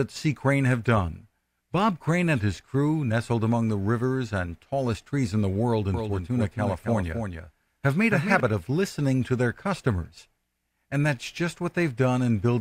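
Speech, with a doubled audio track from 5.94 s to 8.40 s, between "trees in the world" and "of listening to their": a full-band second copy trails about 300 ms behind, roughly 5 dB quieter, with no decay or room colour, starting and stopping abruptly. A spectrogram shows each syllable's pattern repeated, shifted right. The likely cause is a slower second capture path or an edit leaving two copies out of step.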